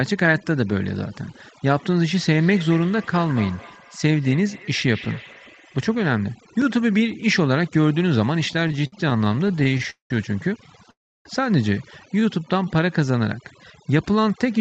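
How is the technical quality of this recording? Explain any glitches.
The recording has several clear technical problems, layered over speech that has been processed throughout; the call codec keeps the high end to about 8 kHz.

Overdone noise removal, throughout: the noise reduction was set too strong, muting frequency bands near its noise estimate, so the background breaks into twinkling, warbling specks and quiet speech parts thin out.

Feedback echo between two devices, 2.18 to 6.33 s: a second device replays this microphone's signal back into it, so each sound returns roughly every fifth of a second, thinner and ringing, at about 18 dB below the speech.

Repeated stalls (stutter), 8.53 to 10.11 s: late packets kept emptying the jitter buffer, so the receiver stretched the last sound again and again, filling 0.49 s in all, about a third of the span. The longest single stall is 0.2 s, and the audio drags and stutters with nothing lost.

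Call audio freeze, 10.91 to 11.26 s: the sound stops for 0.34 s, most of it (0.31 s) silent, then resumes where it left off with nothing missing. This is likely a held-up packet stream that ran the jitter buffer dry.

Jitter buffer slow-down, 12.20 to 13.12 s: the receiver repeated tiny pitch periods to rebuild its reserve, adding 0.12 s, so the speech runs at 88% speed with unchanged pitch and drawn-out sounds.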